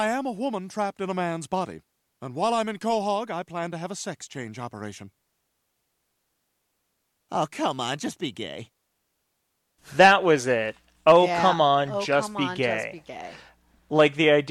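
Speech, with no audible technical fault anywhere in the recording.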